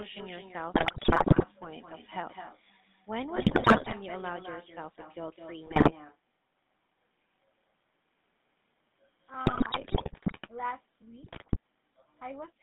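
From the start, the speech carries the buzzy, gravelly roughness of the GSM full-rate codec. The line passes only about 150 Hz to 3.6 kHz, consistent with 13 kbit/s full-rate coding. A spectrogram shows a hard ceiling near 3.6 kHz and smeared, grainy harmonics.

Running alongside it is echo with no canceller. The far end's loudspeaker feeds its microphone, so every phrase returns roughly a fifth of a second later, about 8 dB quieter and thinner. On a waveform each burst of energy has a fainter delayed twin.

GSM bit errors break through at 0.74–1.45 s, 3.36–3.93 s, 5.66–5.93 s, 9.46–10.49 s and 11.22–11.57 s. Corrupted filter, pitch and gain values reach the decoder, producing squawks, pops and gargling, seen as sudden level spikes and distorted spectral blotches frame by frame.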